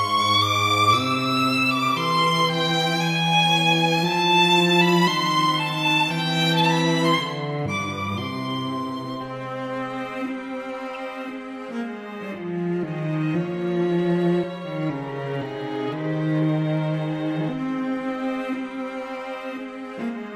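There's one glitch in the audio, at 10.94 to 10.96 s: a short, sharp blip, like a tiny squeak or burst of noise. It's a corrupt frame decoded. A couple of compressed frames had flipped bits, and the decoder played them anyway. The misread gains and codes put energy at frequencies where it doesn't belong, and that lasts only as long as those damaged frames. It peaks somewhere around -30 dBFS.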